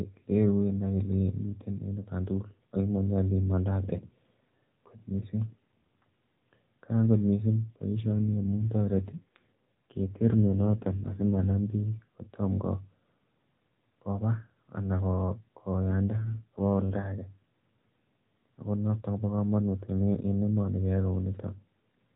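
Just after "kot mising", from 8.10 to 11.53 s, and again from 15.90 to 17.04 s, the speech turns rougher and buzzier, a sign of an AMR rate drop: the network pushes the AMR-NB codec to a lower rate, which fits a step from 12.2 to 5.9 kbps, trading detail for error protection. Unlike packet loss there is no gap, and unlike a bandwidth cut the band stays at the same 4 kHz ceiling.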